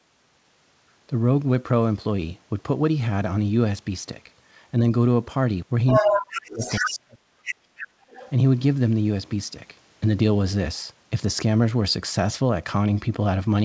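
Speech whose trouble is concentrated between about 5.9 and 8.3 s. The other side's voice leaking through appears from 5.87 to 6.99 s at roughly the talker's own level, then as brief, fainter scraps at 7.45 to 7.55, 7.77 to 7.84 and 8.10 to 8.31 s. On a spectrogram these show as a second, overlapping harmonic pattern, most likely residual loudspeaker echo the canceller failed to remove. Speech suppressed in double talk hits 5.98 to 6.62 s, dipping by about 30 dB, and 6.79 to 7.66 s, by about 40 dB. The waveform envelope collapses to near-silence in pieces while the far side is talking, probably because the canceller could not tell the talker from the echo and attenuated both. Background gated by the echo canceller follows from 7.94 to 8.09 s. The room floor drops by about 6 dB for that 150 ms, which appears as a short, paler notch in the spectrogram's noise floor before recovering. Throughout, nothing appears above 8 kHz, consistent with the wideband call codec on the path.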